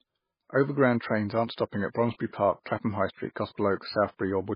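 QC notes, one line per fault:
Throughout, MP3 compression: the encoder was likely starved of bits, at a level that fits about 16 kbps, so it cut the treble entirely above 5.1 kHz and dropped weak frequency lines frame by frame, leaving dull, watery, swirling speech with heavily smeared consonant attacks.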